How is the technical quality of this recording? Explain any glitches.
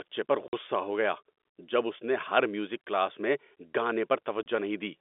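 Two short dropouts break up the speech; it comes down a telephone-band line, with the G.711 coding itself adding little more than the narrow 250 Hz to 3.6 kHz band. The glitches are packet loss filled with silence: at 0.48 s a 50 ms hole appears just before "ہو گیا جب اس", and at 4.43 s there's a 30 ms one. Packets never arrived and the receiver played dead silence in their place. Both gaps fit 10 ms packets. The edges are abrupt, so you hear a chopped-out bit.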